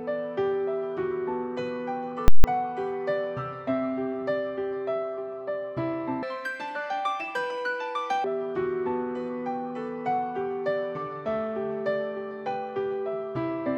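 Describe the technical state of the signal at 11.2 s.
At 11.2 s the signal is intact, with no audible dropout, distortion, clipping or other technical fault at that moment.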